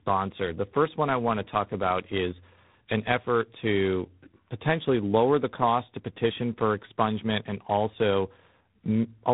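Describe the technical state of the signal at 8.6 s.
Tandem speech coding persists at 8.6 s: G.726 re-encodes AMR-NB's damaged output, so speech sounds rough and warbly, and the spectrogram stops flat at 3.8 kHz.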